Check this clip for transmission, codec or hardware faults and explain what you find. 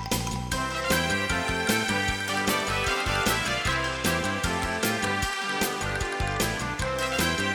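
Nothing stood out on listening to this clip.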